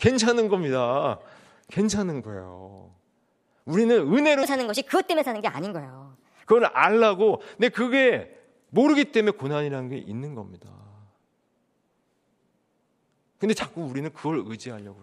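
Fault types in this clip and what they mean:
Section at the wrong speed: from 4.43 to 6.44 s the speech runs 1.34 times too fast, so it rises about five semitones while hurrying; pitch and tempo shift together, unlike a pitch shift or time-stretch, most likely from playback against a mismatched clock.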